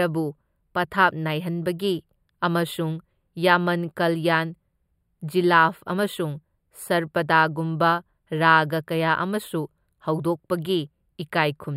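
From start to finish the speech carries channel delay (comb filtering). One channel arrives a few samples late, about 0.07 ms, and when the two are summed to mono the shared content cancels at evenly spaced frequencies. With such a short offset the first notch sits high, around 7 kHz, so the sound is hollow or phasey, with the notches fixed in place throughout.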